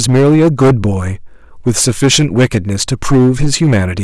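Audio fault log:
Throughout, hard clipping: speech driven about 13 dB past full scale, so roughly a tenth of samples are sliced flat, giving harsh fuzz; waveform shows squared-off peaks, spectrogram shows high harmonic smear.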